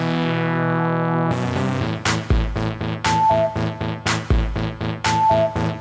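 No technical faults occur at any point in the clip, and the audio's top end stops at 8 kHz, as expected from the G.722 call path it went through.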